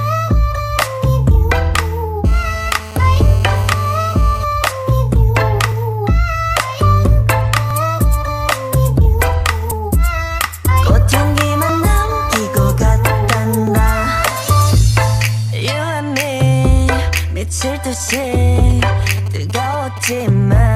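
At 1.74 to 1.76 s, overlapping stream segment timestamps make the player trim sound that was never duplicated, so about 20 ms vanishes and the waveform jumps.

From 2.25 to 4.44 s, a nearby 2G phone in a call transmits bursts that the audio circuit rectifies, producing GSM phone buzz, a harsh, raspy 217 Hz drone full of harmonics at about 18 dB below the signal.

From 4.52 to 7.39 s, a nearby 2G phone sends only sparse burst groups while its user is silent in the call. These GSM signalling bursts come through as faint even ticks with a longer 217 Hz buzz twice a second, far below the signal.

The segment overlap recurs as brief skips at 7.71, 11.69 and 13.67 s, spaced in a way that fits 2-second segments.

From 18.09 to 20.22 s, a phone signalling to the network sends short burst groups that the circuit rectifies, heard as GSM signalling bursts: a galloping train of ticks and 217 Hz buzzes, well below the signal.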